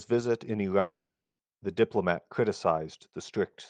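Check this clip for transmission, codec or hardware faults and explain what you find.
One fault is present in this speech clip. Long network dropout, 0.79 to 1.42 s: the stream likely stopped arriving, so the receiver stretched the last sound into a fading buzz, leaving about 0.45 s of silence. When audio resumes, 0.6 s of speech is missing.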